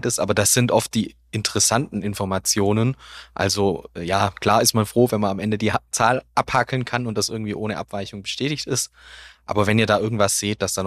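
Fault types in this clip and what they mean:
Nothing to flag here: I listened all the way through and couldn't pick out a single technical fault.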